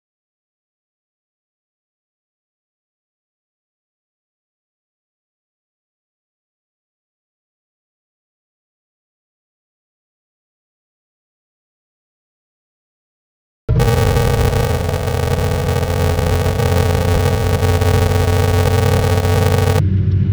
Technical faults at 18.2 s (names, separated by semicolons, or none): planar audio read as interleaved